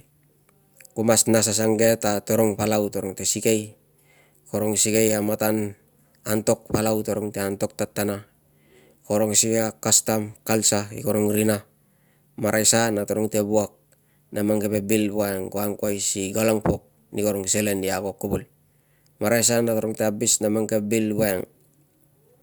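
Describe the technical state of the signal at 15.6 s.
At 15.6 s the speech signal is intact, with no audible fault at that moment.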